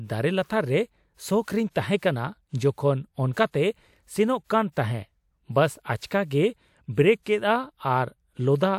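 Pre-echo appears six times in this speech clip, at 1.44, 1.97, 3.33, 4.72, 6.06 and 6.26 s, each a short hiss of about 36 to 54 ms arriving just ahead of a sharp onset. The transform coder has spread quantisation noise across the whole block, so noise scaled for the loud attack also leaks into the quiet stretch before it, leaving those onsets sounding softened and smeared rather than crisp.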